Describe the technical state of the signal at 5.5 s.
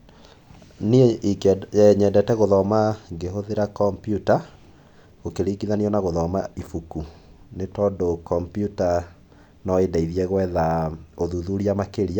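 At 5.5 s the speech signal is intact, with no audible dropout, distortion, clipping or other fault at that point.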